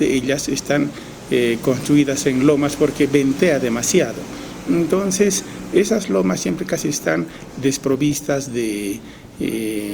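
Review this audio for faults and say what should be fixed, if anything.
From 4.68 to 8.57 s the sound turns rougher and more coarsely coded, a call bitrate drop that points to the encoder falling from about 64 to 28 kbps. To prevent it, make sure the call has enough stable bandwidth so the encoder isn't forced down to a low bitrate.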